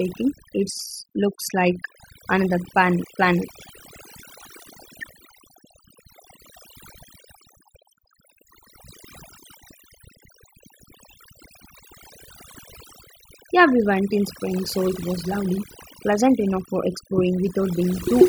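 Throughout the speech, overdone noise removal is audible: the reduction was set so aggressively that individual frequency bands sitting near the estimated noise floor are pulled down or gated out entirely. Between phrases the background collapses to near silence scattered with twinkling specks, while the voice's quieter components are removed along with the noise.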